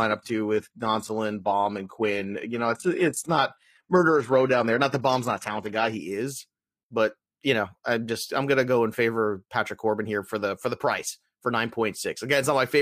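From 0.0 to 6.0 s the speech plays through an adaptive stream starting at a low bitrate: the treble sounds synthetic, with nothing above 12.3 kHz, and artefacts are stronger, pointing to about 16 kbit/s HE-AAC. At 6.0 s quality jumps to what suggests 96 kbit/s AAC-LC, abruptly and without any gap, unlike a dropout or gradual fade.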